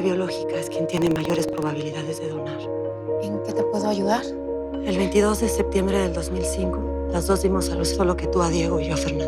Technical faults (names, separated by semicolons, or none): buffer tearing